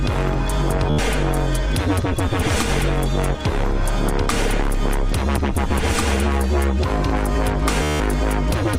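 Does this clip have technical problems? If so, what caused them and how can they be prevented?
Yes, there's Bluetooth stutter twice, at 0.90 to 0.99 s and 7.83 to 8.00 s: packets went missing, so the receiver looped its last short slice, giving a brief buzz, and the sound picks up about 80 ms and 173 ms later. Keeping the devices close with less radio interference prevents it.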